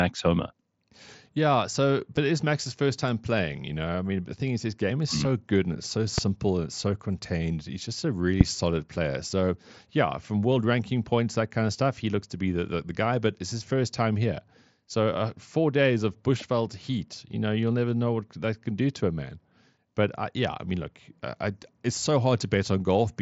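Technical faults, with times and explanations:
2.17 s, concealed Bluetooth headset packet loss: Just before "it is", a single 7.5 ms gap, which fits one lost packet, is filled by repeating recent waveform. This leaves it nearly hidden.
6.18 to 6.20 s, loud pop: Between "good and it's so" and "and it's so contained", a sharp pop rises about 15 dB above the speech, which continues underneath. It is likely a sudden voltage step from a plug, switch, static or driver glitch.
8.41 to 8.43 s, loud pop: Between "just a really" and "solid player", a stronger pop peaks about 25 dB above the speech. It is likely the same added pulse, riding over the speech.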